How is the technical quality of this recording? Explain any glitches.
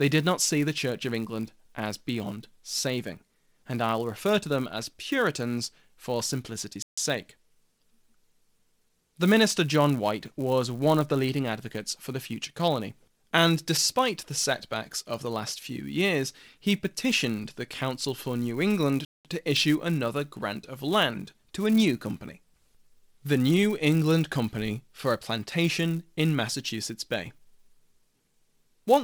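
The technical quality is compromised by a steady buzz under the speech and two brief dropouts to silence.

Throughout the clip, a 200 Hz buzz rides on the speech and grows louder and softer with it. This is a filter restarted on every block: it loses its state at each boundary and begins from silence, leaving a small transient 200 times a second.

At 6.82 s, just after "for simplicity's", the sound cuts to silence for about 0.15 s and then resumes. Again at 19.05 s, just before "to issue another grant", it drops out for about 0.2 s. The likely cause is a Bluetooth stall: interference delayed packets and the headphone buffer ran empty until they arrived.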